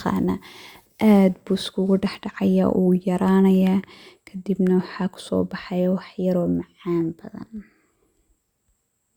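No technical faults can be heard anywhere in the speech recording, with the signal staying steady and intact throughout.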